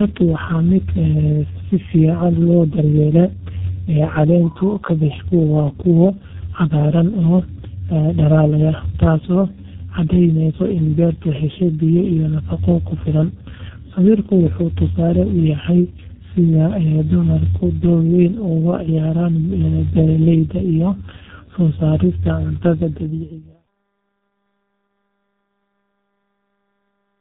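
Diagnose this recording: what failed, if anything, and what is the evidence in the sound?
The failure is at the codec stage: tandem speech coding, present the whole way through. Nothing gets above about 3.8 kHz, and the sound is rough, muffled and warbly. That fits two low-rate speech coders in series, likely a G.729A leg and then G.723.1, the later one re-coding the earlier one's artefacts. The fade-out from around 22.5 s to 23.66 s is a separate, smooth editorial fade.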